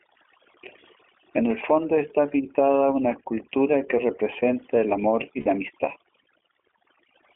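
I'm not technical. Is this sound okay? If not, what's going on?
No. Overdone noise removal runs through the whole clip. A noise-cleaning tool was set too aggressively, so it mutes parts of the sound it mistakes for background hiss. The background drops and breaks up into twinkling specks.

The iLBC codec, an internet-calling format, also affects the whole clip. It squeezes speech into a narrow telephone-like range, keeping roughly 250 Hz to 3.5 kHz, so deep tones and crisp high sounds are gone. Its compression leaves the speech noticeably rough and slightly artificial.

Lost iLBC frames occur from 5.40 to 5.47 s. About 60 ms of audio never arrived, and the player filled the gap by repeating the last bit of sound with added noise. It comes out as a brief buzzy held tone, and the speech recovers immediately.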